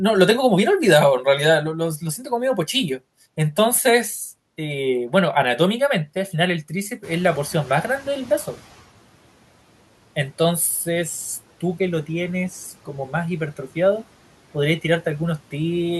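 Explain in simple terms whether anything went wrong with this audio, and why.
Something did slip here: the noise suppressor catching up. Around 7 seconds the room noise jumps up quite a bit, and the suppressor's idea of what counts as noise is still tuned to the quieter room. So from 7.03 s the louder noise leaks through behind the speech with only light cleanup. Over the next 1.7 seconds or so the suppressor relearns the noise, and by 8.76 s the background has sunk down, well under the speech.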